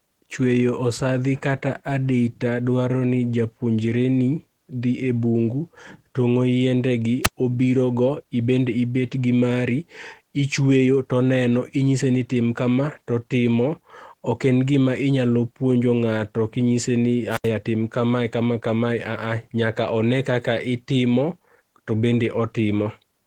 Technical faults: Opus voice compression; wireless microphone squelch dropout

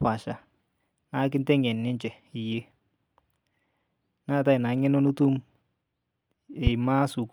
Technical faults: loud pop

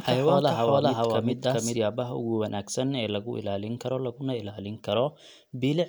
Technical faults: doubled audio track

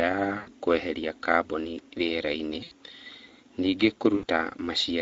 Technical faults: Speex codec; VoIP packet loss concealed by the speech codec

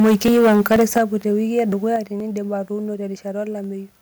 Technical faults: microphone overload; audio missing between chunks; microphone volume stepped down

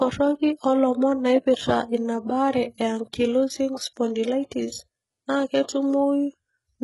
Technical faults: HE-AAC compression

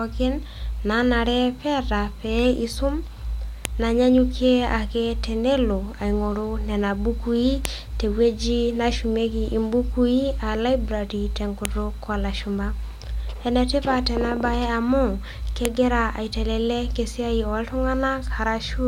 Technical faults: file header played as audio

